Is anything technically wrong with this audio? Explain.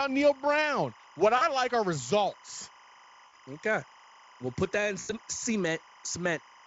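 Yes. Two problems are present in this speech clip.

Timecode bleed runs from start to finish. Linear timecode from an adjacent track or cable has leaked in, and its square wave flips between tones near 1 kHz and 2 kHz. The result is a steady chirping warble sitting roughly 25 dB under the voice. The code's pattern repeats at 25 frames per second. On a spectrogram it shows as persistent horizontal bands at both pitches, each with its stack of odd harmonics, unbroken through pauses in the speech.

VoIP packet loss concealed by the speech codec occurs three times: 1.37–1.45 s (40 ms lost), 3.27–3.36 s (60 ms) and 4.99–5.13 s (100 ms), the lengths fitting runs of 20 ms frames. Lacking data, the decoder repeated its last pitch and spectral shape at falling gain. Each gap turns into a buzzy, fading smear, and the voice stays thin briefly after audio resumes. A spectrogram shows frozen harmonic stripes dimming out, and the waveform shows a decaying, unnaturally periodic stretch, longest at 4.99 s.

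The Speex coding itself, at a rate pointing to about 28 kbps, adds only light coloration.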